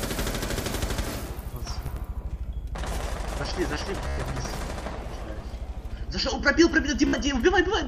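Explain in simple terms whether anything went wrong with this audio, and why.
Bluetooth stutter at 1.86, 4.08 and 7.07 s. Wireless data arrived late, so tiny slices repeated as a buzz. Then the sound jumped ahead, skipping up to 0.1 s.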